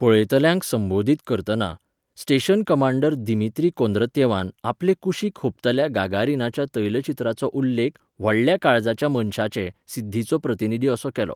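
Nothing technically wrong turns up anywhere in this bit of speech, so there are no times or causes to point to.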